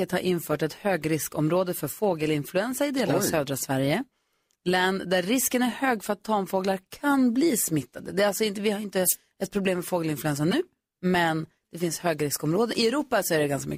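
At 10.51 to 10.53 s, a corrupt frame decoded breaks into the speech. It lasts about 22 ms, roughly a single frame. Some bits in that compressed frame were damaged, yet the decoder still played it. Misread gains and codes sent energy to the wrong frequencies. The result is a short chirp, squeak, blip or burst of noise that does not belong to the speech around it. It peaks at about -15 dBFS.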